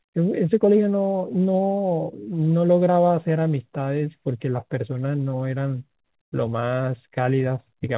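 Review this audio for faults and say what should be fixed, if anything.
Nothing here needs fixing: the speech comes through a G.711 mu-law call path at 64 kbps with nothing above 4 kHz, which is just what that narrowband codec does, and there are no faults to chase down.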